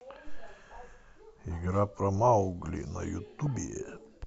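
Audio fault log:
0.44–0.46 s, DAB burbling: weak reception lets bit errors, around one or two in a thousand, slip past the error correction into the MP2 audio data, so corrupted samples put short noise blips in single sub-bands and corrupted scale factors make sub-bands jump in level for up to a frame, giving a brief patch of burbling over the speech.
3.27–3.56 s, DAB burbling: uncorrected errors at the same rate hit 11 frames, so the burbling runs on for nearly 0.3 s.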